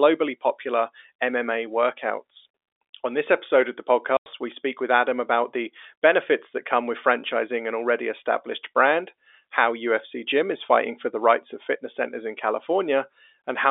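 At 4.17 s, right after "this episode of the", the speech drops into dead silence for 90 ms until 4.26 s, when it resumes on "we speak with". This is packet loss filled with silence: the receiver had nothing to play and inserted silence. A gap of that length fits three lost 30 ms packets. Both edges cut off abruptly. Concealment would fill the hole with faded or repeated sound, but here it is plain silence, standing out against the narrow telephone-band G.711 line.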